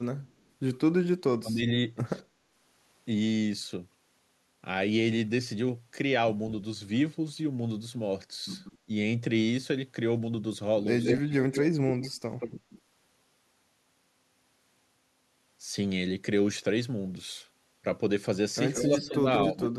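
Echo leak appears in this speech recording at 0.3–0.43 s, 8.64–8.78 s, 11.02–12.81 s and 18.74–19.68 s: a delayed copy of the voice trails it by 207 ms at first and 177 ms afterwards, rising from faint (about 40 dB down) to nearly as loud as the speech (about 5 dB down), likely because a far-end echo canceller let loudspeaker pickup through. Speech suppressed in double talk occurs at 1.14–1.64 s, 8.85–8.89 s, 11.18–11.54 s and 18.89–19.77 s, where the voice dips by up to roughly 40 dB, likely as the canceller turns down both sides when they overlap.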